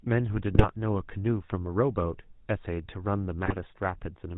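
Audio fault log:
throughout GSM full-rate codec. The speech has a buzzy, gravelly roughness and nothing above 4 kHz. The codec models the vocal tract and drives it with a sparse, regular pulse excitation. The damage is plainly audible and fits a 13 kbps stream.
0.54–0.67 s and 3.46–3.61 s GSM bit errors. The speech breaks into squawks, pops and gargling for roughly 0.13 to 0.15 s each time. Corrupted filter, pitch or gain values distort the spectrum and level, which fits an error rate near 3 percent.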